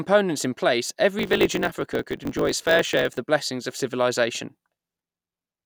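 Speech, with a block size mismatch (truncated) from about 1.17 s to 3.19 s. You'll hear a steady 50 Hz buzz laid over the voice, and the delivery rushes along about 1.07 times faster while the timbre stays. That points to one stage writing longer blocks than the next one reads, which fits blocks of 1024 samples. The tail of each block gets dropped, so every cut sets the buzz rate and the lost bits speed things up.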